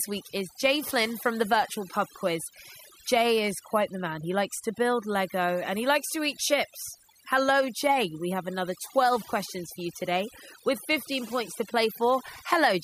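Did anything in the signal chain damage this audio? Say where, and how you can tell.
Yes. The damage happened at the processing stage, where a noise reduction tool was set too strong, giving overdone noise removal across the whole speech clip. Frequency bands that sat close to the tool's noise estimate were pulled down hard or switched off entirely. Quieter parts of the voice fell under that threshold as well. The result is a background that drops and breaks up into twinkling, warbling specks.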